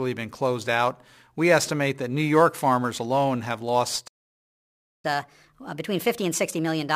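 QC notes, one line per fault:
4.07–5.05 s, playback stall: the player likely ran out of data or was blocked, so speech cuts to silence for 0.96 s after "farmers alone have".
5.05–6.96 s, catch-up at higher speed: the player resamples its backlog at 1.25x to regain time, so speech runs faster and roughly four semitones higher.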